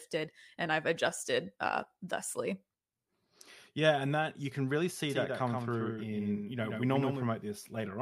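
A doubled audio track runs from 5.10 to 7.24 s in this speech clip, starting right after "that you can really". A second full-band copy trails the original by roughly 150 ms, a few dB quieter, with no reverberant tail. It switches on and off abruptly, most likely from a slower capture path recording the same signal again.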